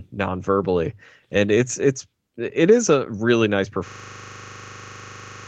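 Speech that locks into a system hang loop from 3.88 s to the end: one 40 ms slice repeats exactly at 25 Hz, buzzing in place of about a second and a half of speech. Unlike a dropout, nothing goes silent. A frozen driver leaves the ring buffer cycling.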